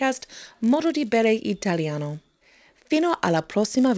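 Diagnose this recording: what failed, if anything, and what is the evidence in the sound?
A resampler restarted on every block fails in the sample-rate conversion stage. Across the whole clip, the speech carries a 100 Hz buzz from ticks every 10 ms. Each block is converted without its neighbours, likely in a 44.1 kHz to 16 kHz conversion. A spectrogram shows evenly spaced vertical lines during speech, and the waveform shows small steps at block edges.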